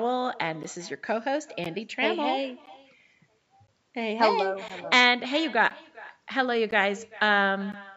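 Echo with no canceller runs through the whole clip. The far end's loudspeaker feeds back into its microphone with nothing removing it, so every phrase returns roughly 0.4 s later as a thinner copy about 22 dB below the speech.

Gaps between chunks fall at 0.63, 1.64, 2.66, 3.67, 4.68, 5.70, 6.71 and 7.72 s. Each is a silent hole of about 13 ms, repeating every second, where the audio was delivered in one-second chunks and the joins were left unfilled.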